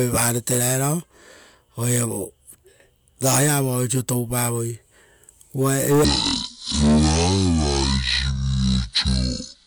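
Section at the wrong speed, 6.04 s to the end at 9.66 s: the speech abruptly runs at half speed and drops roughly ten semitones, turning deep and drawn out. Pitch and tempo fall together, likely from playback against the wrong clock.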